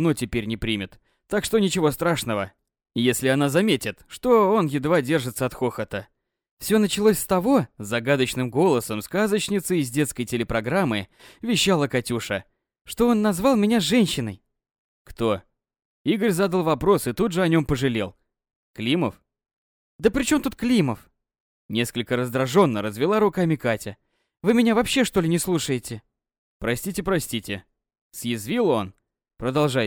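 No technical faults can be heard anywhere in this audio.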